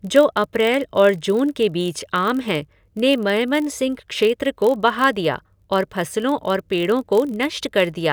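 A low buzz at about 43 Hz runs under the speech for the whole clip, with its pace essentially unchanged. This is a block size mismatch (padded): each block arrives slightly short and is zero-filled, which fits a 1024-sample read, inserting a tiny gap every block.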